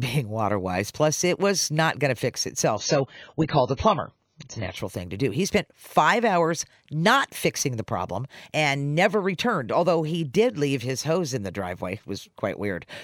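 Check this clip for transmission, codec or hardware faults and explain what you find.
One fault is present: a stretch where the adaptive stream drops to a lower bitrate. From 2.77 s to 4.77 s the audio abruptly loses its top end, with nothing above 7 kHz, and codec artefacts thicken, then full quality snaps back with no gap at either edge. A slowed connection made the player fetch a lower-quality version of the stream for those two seconds. The band-limiting and smearing fit a move from around 96 kbit/s AAC down to roughly 16 kbit/s.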